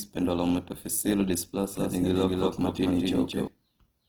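Opus compression runs through the whole speech clip, and its damage is plainly audible. The sound is rough and grainy rather than swirly, which points to Opus in its music (CELT) mode at a low bitrate around 16 kbps. The likely cause is an encoder short of bits: it keeps each band's overall energy but fills the detail by folding lower bands upward or inserting noise. Bandwidth stays full, with content reaching about 20 kHz.

A doubled audio track appears from 1.77 s to 3.47 s. A second full-band copy of the same speech trails the original by about a fifth of a second at roughly equal loudness, giving a hard, dry echo with no decay or room colour. It cuts in and out abruptly at both ends. The likely cause is the same signal captured again through a slower path, or an edit holding two misaligned copies.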